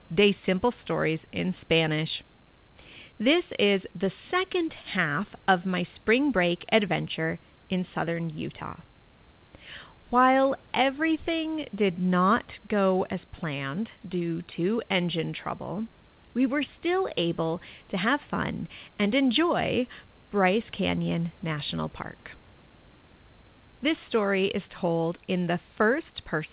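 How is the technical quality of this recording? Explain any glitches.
No glitches to report: the speech comes through a narrowband call path with nothing above 4 kHz, which fits G.711 mu-law coding, and the room noise sits about 35 dB below the speech.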